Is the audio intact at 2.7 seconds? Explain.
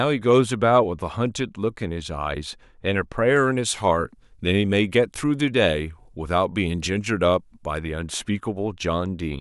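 Yes, the audio is intact at 2.7 seconds, with no fault heard at that moment.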